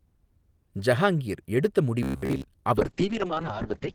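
From 2.03 to 2.45 s, just after "ஜஹாங்கிர் எடுத்த", the speech turns into a rigid robotic buzz at 66.8 Hz, most likely from repeated short buffers of roughly 15 ms. It shows as evenly spaced harmonic stripes.

From 2.78 s to the end, a call bitrate drop from 32 to 6 kbps makes the speech rough and muffled. The spectrogram's energy above 8 kHz abruptly disappears.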